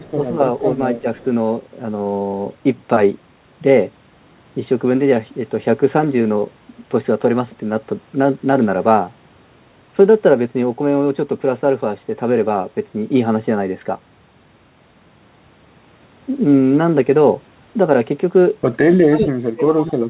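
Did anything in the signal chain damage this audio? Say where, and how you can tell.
Yes. At the call-processing stage, an echo leak likely came from an echo canceller that failed to remove all of its loudspeaker pickup. Faint, delayed copies of the speech, about 30 dB below the talker and lagging by 267 ms, sit at 0.0–0.12 s and 1.18–1.24 s.

The same call processing also likely shows speech suppressed in double talk. At 1.01–1.05 s the talker dips briefly by a few dB. From 19.08 s to the end, the level falls by about 30 dB, as if the canceller turned the talker down along with the echo. The band stops at 4 kHz throughout, which fits a G.711 call codec.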